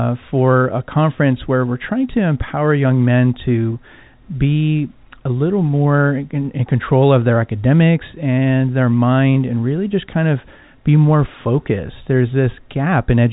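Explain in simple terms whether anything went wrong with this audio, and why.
Nothing went wrong with this speech recording. It has passed through ordinary G.711 telephone coding, which is why it has the narrow sound of a phone line, with nothing above about 3.8 kHz.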